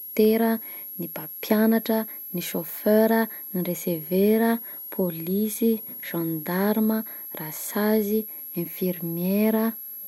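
From start to finish the speech carries a switching supply whistle, a thin high tone that wanders between about 11.6 and 11.7 kHz and sits roughly 15 dB below the speech. A switching power supply is running in an audible burst mode or beating with another one, and its small pitch drift follows shifts in load. On a spectrogram it appears as a narrow, slightly wavering horizontal line near 11.6 kHz. On the waveform it shows as fine fuzz that remains visible in the pauses.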